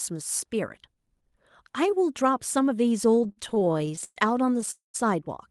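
From 3.11 to 4.18 s the speech drags and stutters, breaking again and again as the last sound is stretched over short holes, the longest about 122 ms. Roughly a third of that stretch is filled in. These repeated stalls (stutter) come from packets arriving late, draining the jitter buffer each time.

At 4.71 s the speech stops in a fading buzz that sinks to silence for about 140 ms, then resumes at 4.96 s where it left off, about 231 ms later. This call audio freeze was likely caused by packets held up in transit.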